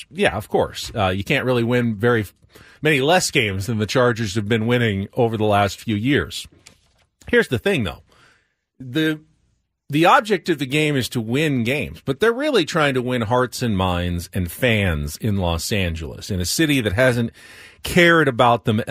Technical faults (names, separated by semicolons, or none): none